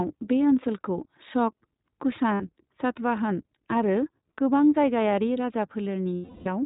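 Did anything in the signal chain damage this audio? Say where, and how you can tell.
Yes. iLBC codec, throughout: at the codec stage, nothing passes above 4 kHz and the speech sounds plainly rough and synthetic, consistent with 20 ms iLBC frames at about 15.2 kbps.

Lost iLBC frames, at 2.34–2.42 s and 6.16–6.48 s: in the network, packets went missing and the decoder repeated the last pitch cycle with noise. The 60 ms gap sounds like a held, buzzy vowel; the 320 ms one fades.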